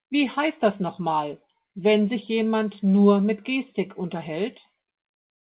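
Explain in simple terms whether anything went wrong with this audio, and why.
Nothing went wrong here; there are no faults to point to. The speech went through a call connection, and nothing above about 4 kHz comes through, which gives it the narrow, telephone-like sound of an ordinary G.711 phone codec.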